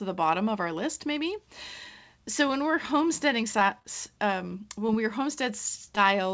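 From 3.52 to 3.87 s, right after "when we're homesteading", repeated packet loss gives a robotic sound. Five short gaps, the longest 26 ms, are patched by extending earlier sound. Speech turns choppy.

Short concealed packet loss follows at 4.87 to 4.89 s, 5.85 to 5.88 s and 5.96 s. Each hole is about 10 ms and is filled from the preceding audio. Each is heard as a brief smear or wobble.

Through the call path, nothing is heard above 8 kHz, which fits a G.722 codec at 64 kbps.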